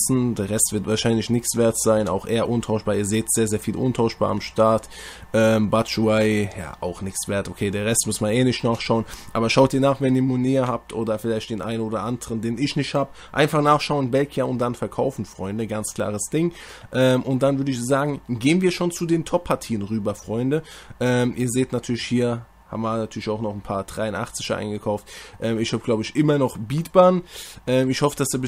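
At 9.68 s the level drops abruptly by about 4 dB. It stays at that lower level until the end of the clip. This is a sudden gain jump. The gain changed from one sample to the next with no fade. The cause is likely a gain setting or bit shift applied without a ramp. The sound and the background noise fall together.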